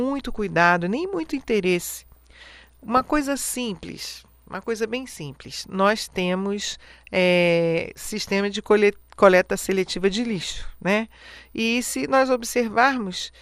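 Throughout, the speech sounds dull and grainy with a plain gurgle, likely MP2 compression at a low rate near 80 kbps starving upper sub-bands of bits. From 2.12 to 3.08 s, and again from 6.60 to 6.92 s, short blips of noise break through. This is DAB burbling: bit errors slip past error correction and put wrong samples into single sub-bands.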